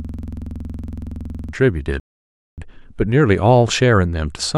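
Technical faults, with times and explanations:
0.00 to 1.53 s, system hang loop: the clip opens with the loop already running. A 46.4 ms slice of audio repeats exactly, 32 times, a length that fits a 2048-sample ring buffer. The driver froze while the hardware kept replaying that buffer, so the sound becomes a coarse buzz at 21.5 Hz. On the waveform, identical blocks tile end to end. On the spectrogram, the same pattern stamps out at even intervals, with harmonics spaced 21.5 Hz apart.
2.00 to 2.58 s, rebuffering stall: the audio drops to complete silence for 0.58 s, then picks up exactly where it left off. The player ran out of downloaded data and waited for more to arrive. Nothing is skipped, but the pause adds that much time to the clip. On the waveform, this shows as a flat gap with clean edges. On the spectrogram, it is an empty vertical band across all frequencies, with the material on either side continuing seamlessly.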